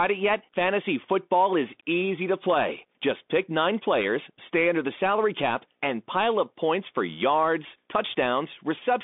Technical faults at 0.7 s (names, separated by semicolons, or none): Bluetooth CVSD headset codec